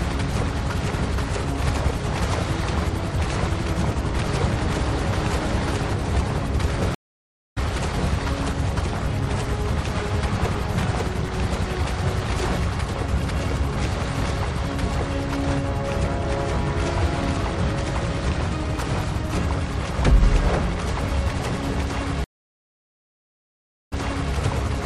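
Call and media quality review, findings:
Stream reconnect at 6.95–7.58 s: about 0.62 s gap, then picks up roughly half a second further on. Again at 22.24–24.34 s: 1.68 s gap, resumes 0.42 s earlier, so a short stretch repeats. Connection dropped, player reconnected and restarted the decoder mid-stream.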